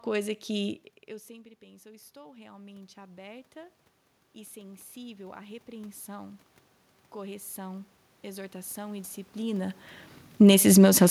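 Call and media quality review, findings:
Automatic gain rising, 1.27–6.47 s after "que eu" (input drops about 22 dB, gain climbs about 10 dB) and 7.12–9.83 s (about 5 dB more). AGC ramping up slowly on quiet input; room noise swells with the voice, unlike the talker movements near 0.5 s and 9.5 s.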